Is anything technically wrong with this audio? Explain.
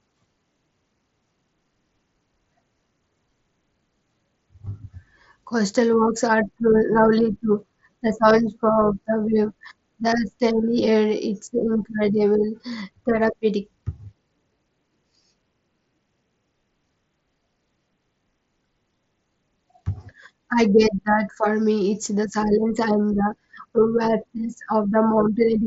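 No, nothing here is technically wrong; it's just speech coming over a Bluetooth mSBC headset link, so the sound tops out around 7.7 kHz, as that wideband path is built to do.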